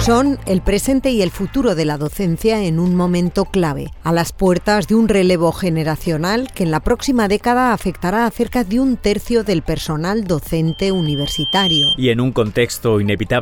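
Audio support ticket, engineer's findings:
Loudspeaker feedback squeal, 10.67–11.98 s: 3.2 kHz tone swelling over about a second to roughly signal level. Mic-speaker loop gain above one. Growth, not steady whine, rules out interference.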